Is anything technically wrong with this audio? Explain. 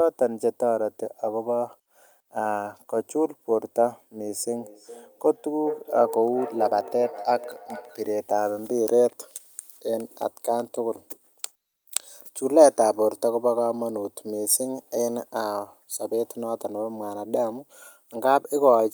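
Yes. From 4.52 to 8.09 s the speech has feedback echo between two devices. Two devices in the same room are joined to one call. One plays back what the other's microphone sent, and that microphone picks it up again. Each device's echo canceller removes only its own playback, so the loop is never broken. Each word returns about every 400 ms. The repeats sound thin and ringing, peaking about 12 dB below the speech.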